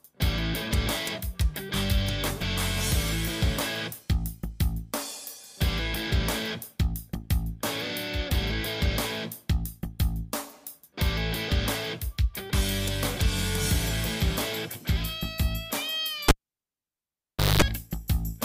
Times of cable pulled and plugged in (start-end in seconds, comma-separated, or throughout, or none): 16.28-17.62